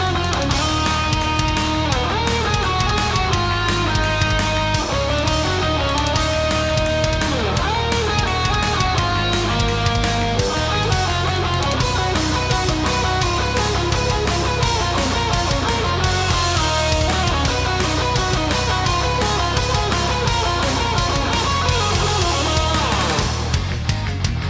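No technical faults can be heard anywhere in the audio.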